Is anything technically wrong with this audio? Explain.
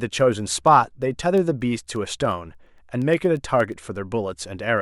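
Yes. Word clock ticks run from 0.20 to 4.78 s: the receiving device isn't locked to the sender's clock, which is off by around 200 ppm, so one sample is dropped or repeated about every tenth of a second. This yields roughly 40 sharp ticks over the speech.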